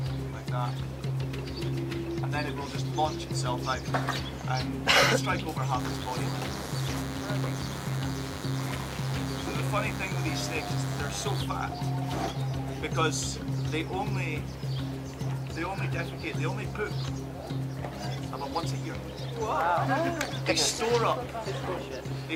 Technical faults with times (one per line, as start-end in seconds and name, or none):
5.79-11.43 DECT cordless phone buzz